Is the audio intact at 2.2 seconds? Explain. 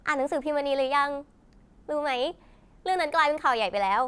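Yes, the speech at 2.2 seconds plays through cleanly, with no dropout, click, distortion or other fault at that moment.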